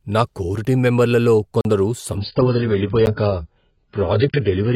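At 1.61 s, just after "నా కోర్ టీమ్ మెంబర్లలో", probably because the output buffer was not filled in time, there is a 40 ms block of digital silence: the speech drops out and returns abruptly around a short hole.

From 2.17 s to the end, the adaptive stream switched to a lower bitrate, and the sound changes suddenly. Nothing remains above 5.4 kHz, the treble turns dull, and codec artefacts rise, which fits a fall from about 96 to 12 kbit/s AAC.

At 3.06 s a second, 10 ms block of digital silence lands inside that degraded stretch and is heard as a single tick.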